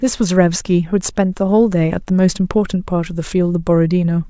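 No technical faults are audible.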